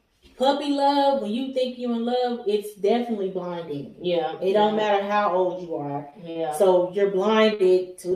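At 5.91, 6.10, 6.30 and 7.54 s, a short stall from a late packet holds the sound for 21 to 52 ms with a faint buzz or dip. Unlike a lost packet, nothing is skipped. Playback resumes from the same point, just later.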